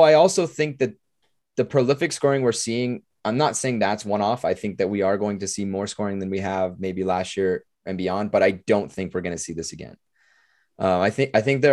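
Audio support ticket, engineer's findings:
Nothing stood out on listening; no fault heard in the speech recording to attribute to any component.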